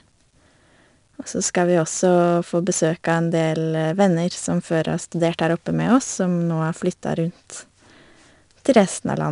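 A speech recording with plainly audible 4-bit ADPCM compression throughout: each sample is coded as a coarse step off a prediction, so a gritty hiss rides along with every loud syllable and sharp onsets get smeared. Nothing above 10.6 kHz, which points to roughly a 22 kHz sample rate.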